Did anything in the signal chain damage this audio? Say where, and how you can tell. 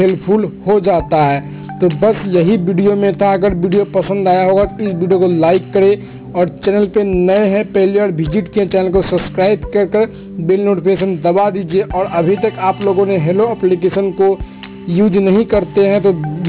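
Yes. Aliasing runs throughout, from sample-rate conversion: content above 4 kHz folds back as gritty tones about 25 dB down, which fits an unfiltered drop to 8 kHz.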